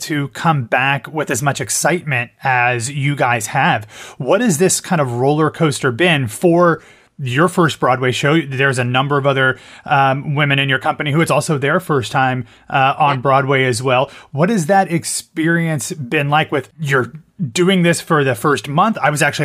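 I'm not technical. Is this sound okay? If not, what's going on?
Yes, it's fine: nothing in this recording sounds broken or glitchy, so there's nothing you need to worry about here.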